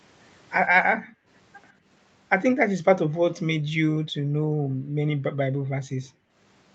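At 0.95 to 1.28 s the echo canceller clamped the microphone while the loudspeaker played. The background is gated by the echo canceller, and the room sound drops by about 35 dB. Within that stretch, at 1.07 to 1.13 s, there is an echo leak: a faint copy of the speech arrives 142 ms late, likely because the canceller failed to remove everything the microphone picked up from the loudspeaker. The same gating returns at 1.73 to 1.86 s as a shallower dip of about 11 dB. It then hits at 3.6 to 3.78 s, 4.11 to 5.02 s and 5.24 to 6.35 s, each time pulling the room tone down by about 40 dB before it comes back.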